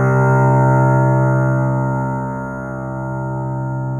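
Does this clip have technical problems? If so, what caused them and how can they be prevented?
Yes. Imaging from linear upsampling runs through the whole clip. The rate was raised by straight-line interpolation from a source that sounds like 8 kHz audio. The top end is dulled, and a faint mirrored copy of the spectrum between 4 and 8 kHz, roughly 40 dB down, adds a light metallic shimmer. On a spectrogram, energy stops near 4 kHz, with a dim reflected image above it. Prevent it by resampling with a proper windowed-sinc or polyphase low-pass filter.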